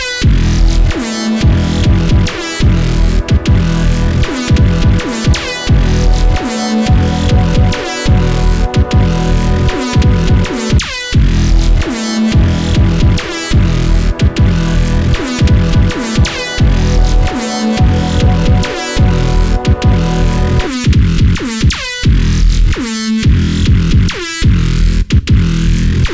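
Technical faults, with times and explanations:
No technical faults heard.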